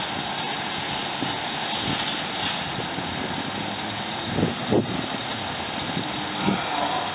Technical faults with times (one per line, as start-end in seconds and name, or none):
none